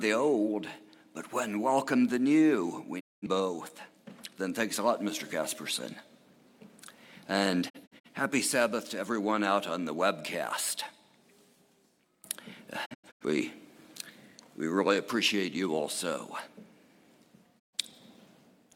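Four short muted gaps, each entered with a brief 20 ms fade, cut the sound at 2.99 s (about 0.21 s of silence), at 7.68 s (scattered holes over 0.34 s), at 12.84 s (scattered holes over 0.34 s, the longest 85 ms) and at 17.58 s (about 0.13 s). These are digital broadcast dropouts: the receiver lost or rejected corrupt frames, which fits frames of about 43 ms, and muted until clean ones returned, so that audio is gone.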